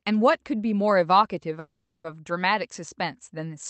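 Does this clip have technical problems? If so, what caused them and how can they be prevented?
Yes. There is a call audio freeze from 1.59 to 2.07 s in this speech. For about 450 ms the sound turns into a fading buzzy continuation, then drops to roughly 30 ms of silence before the speech resumes with nothing lost, now running about 450 ms later. The likely cause is delayed packets draining the jitter buffer, so the receiver stretched the last sound. On a spectrogram this shows as a smeared, unchanging band that dims into a short blank strip, capped near 8 kHz like the rest of the Opus call audio. A larger adaptive jitter buffer and a more stable network path would prevent it.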